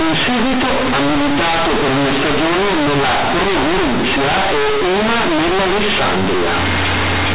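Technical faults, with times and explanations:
Throughout, companded audio read as linear: the speech was stored as A-law bytes but played back as plain linear 8-bit samples without expansion, so every sign change throws the output across about half its range. Quiet passages come out as loud as speech, giving harsh buzzy distortion and heavy hiss in the pauses. Ordinary clipping would leave pauses quiet, and an A-law versus mu-law mix-up would only roughen the sound rather than make it this violent.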